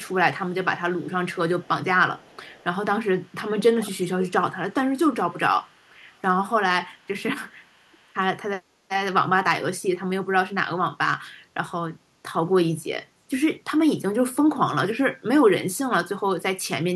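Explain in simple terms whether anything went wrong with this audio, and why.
Something did go wrong: an echo leak. A faint repeat of the speech trails it by about 0.39 s at 0.0–1.68, 2.17–2.64, 3.21–4.31 (clearest), 5.32–6.21, 6.97–7.08 and 7.62–8.13 s. It's likely a loudspeaker's sound escaping an echo canceller. Unlike room echo, it's a distinct delayed copy, not a smeared tail.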